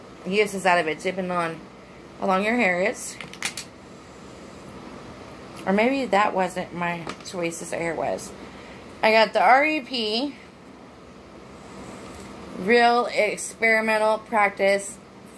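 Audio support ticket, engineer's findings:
No audible faults found on review.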